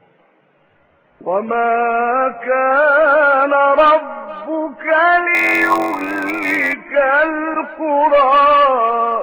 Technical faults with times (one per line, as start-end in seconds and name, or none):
5.34-6.74 block size mismatch (padded)